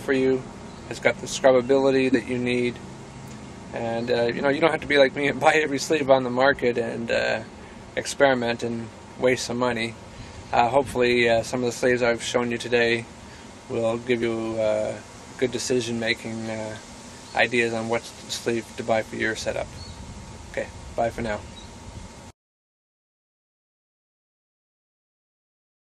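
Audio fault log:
2.12–2.15 s corrupt frame decoded: a brief burst, roughly two frames long and peaking near -10 dBFS. Damaged bits were decoded as if valid, putting energy at wrong frequencies. It is frame-shaped, unlike a broadband click.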